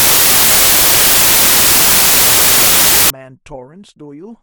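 A speech clip. From the start to 3.10 s it is loud, harsh broadband noise: samples built from the wrong bytes, so the fast-changing low bits became each value's large part.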